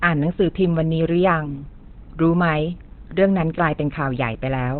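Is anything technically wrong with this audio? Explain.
Yes. Throughout the clip the speech is muffled and hoarse, with nothing above 4.2 kHz. This is likely Opus compression in its narrowband speech mode at a low bitrate, with hoarse grain rather than MP3's swirling.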